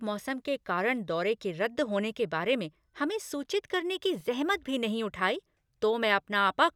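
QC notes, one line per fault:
4.20 s, corrupt FLAC frame: A brief, faint tick sits in the speech here, peaking at about -46 dBFS. Damaged bits inside the compressed data threw off the decoder's prediction, and no checksum check caught it. The predictor then built samples from wrong values, so a short error signal was added to the sound. It is short and low, which points to damage near the end of a frame or two. Clean audio resumes at the next intact frame.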